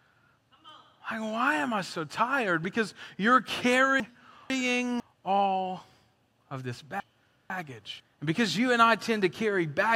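Chunks out of order in this speech: at 4.0–5.0 s and again at 7.0–8.0 s, a 500 ms block arrives one chunk late, so two halves swap, jumbling the sound.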